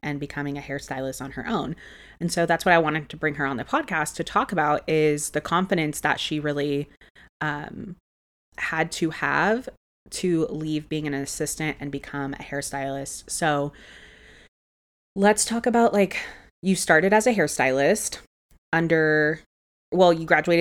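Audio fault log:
No technical faults are audible anywhere in this speech.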